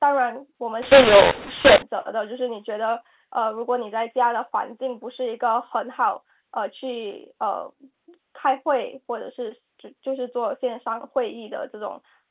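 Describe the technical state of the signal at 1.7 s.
At 1.7 s, A-law samples are decoded as mu-law (mu-law and A-law mixed up, 0.82–1.82 s): levels scramble into harsh distortion, with noise-filled pauses as the quietest samples are lifted well above silence.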